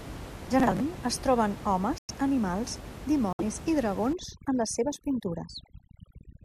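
From 0.40 to 0.80 s there is processor overload crackle: buffers of around 10 ms keep missing their deadline and are skipped, leaving a gritty burst of hard-edged gaps.

At 1.98 to 2.11 s and 3.33 to 3.43 s, corrupt frames are muted. The decoder rejected damaged compressed frames, leaving abrupt silent holes of about 0.12 and 0.10 s. Each points to several consecutive frames.

From 4.13 s to the end, overdone noise removal cuts bands near the noise estimate. The room noise, about 14 dB below the speech, drops and breaks up into twinkling specks.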